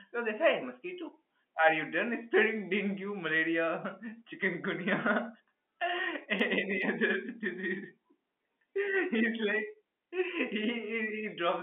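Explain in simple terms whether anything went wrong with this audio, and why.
Nothing went wrong here: the speech has the narrow, slightly boxed-in sound of an ordinary landline call, which is simply how telephone coding is meant to sound, and nothing out of place turns up at any point.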